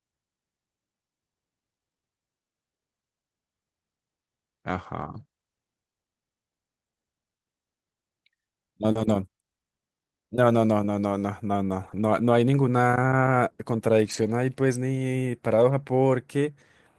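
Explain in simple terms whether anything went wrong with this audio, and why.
Two network problems can be heard in this speech. At 8.91 to 8.97 s there is a short concealed packet loss: about 40 ms of audio arrived too late, so the receiver extended the preceding sound to cover the hole, leaving a brief smear or wobble.

Right after that, from 8.95 to 9.09 s, and again at 11.83 to 12.01 s and 14.05 to 14.31 s, each lost packet was rebuilt from error correction. Following packets carried rough backup copies, so nothing drops out, but these stretches of 80 to 140 ms sound grainier and noisier.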